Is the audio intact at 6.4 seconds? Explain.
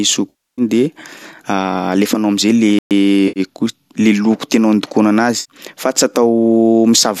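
Yes, the audio is intact at 6.4 seconds, with no fault at that moment.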